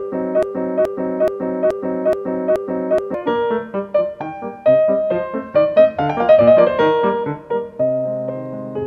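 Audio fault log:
0.00–3.14 s, broken-record loop: already going when the clip opens, a 0.43 s fragment repeats six times back to back, likely a stalled player resending its last buffer.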